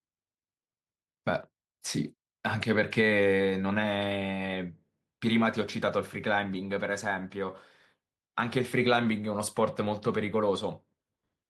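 No technical faults can be heard anywhere in this speech recording. There is no moment in it that calls for a timestamp.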